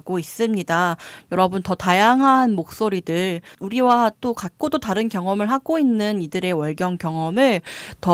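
Lost packets rebuilt from error correction occur at 2.17 to 2.27 s, 3.87 to 3.89 s and 7.33 to 7.35 s in this speech. At each point packets went missing, but the following packet carried a low-bitrate backup copy that the decoder played in place of the original, so there is no gap. Those stretches sound briefly rougher and noisier. The first, with about 60 ms rebuilt, fits three separate lost packets, and the later two fit a single 20 ms packet each.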